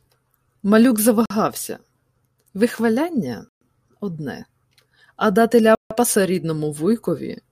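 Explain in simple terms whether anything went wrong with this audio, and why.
The speech drops to silence three times: at 1.26 to 1.30 s, 3.49 to 3.61 s, and 5.75 to 5.91 s. Each gap lasts a split second. This is likely a Bluetooth stall: wireless interference delayed the audio, the headphones ran out, and playback paused.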